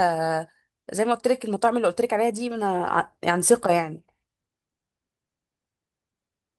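Speech with no audible faults.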